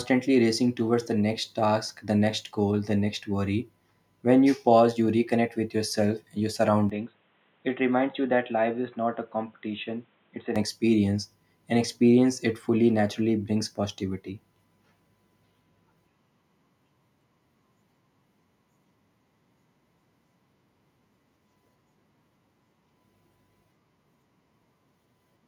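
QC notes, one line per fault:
6.90–10.56 s, input switched to a poorer device: Just after "and your", the speech turns dull and boxy, with nothing above 3.9 kHz, a level drop of around 5 dB and a faint new background noise well beneath it. Full brightness returns at 10.56 s. There is no gap at either change. The likely cause is the recording jumping to a narrower-band microphone or headset call profile and then back, each input with its own tone and noise.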